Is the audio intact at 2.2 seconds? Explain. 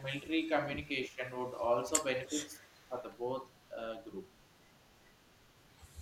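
No. From 2.16 to 2.29 s there is an echo leak: a faint copy of the speech returns about 0.3 s late, roughly 35 dB down, likely from a loudspeaker echo the canceller missed. A spectrogram shows a weak, smeared duplicate of earlier harmonic patterns.

Overlapping it, from 2.28 to 2.96 s, is speech suppressed in double talk. The level dips by roughly 10 dB in patches totalling about 0.4 s, likely because the canceller turned the talker down while the far side spoke. The waveform envelope shows sudden notches.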